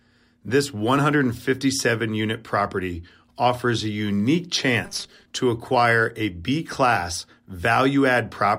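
Speech recording. From 4.84 to 5.27 s, new audio likely arrived too seldom and a 5 ms slice was looped, causing robotic sound from repeated short buffers: a rigid, metallic 200 Hz buzz.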